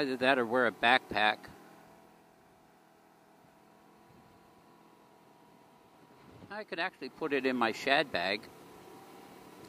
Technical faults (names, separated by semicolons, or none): none